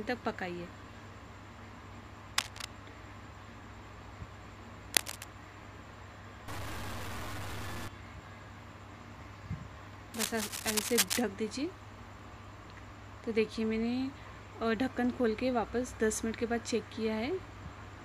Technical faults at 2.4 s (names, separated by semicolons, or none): cable scratch noise